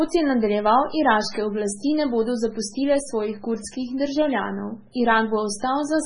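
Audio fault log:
Throughout, MP3 compression: heavy watery swirl and nothing above 10.6 kHz; unlike a plain low-pass, weak detail flickers, likely fitting a 16 kbps MP3 encode.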